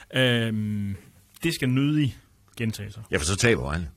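At 1.21 s the speech switches abruptly, with no gap, to an adaptive stream at a lower bitrate, and stays there to the end. The treble is cut, with nothing above 16.5 kHz, and codec artefacts rise, consistent with AAC dropping from 96 to 48 kbit/s.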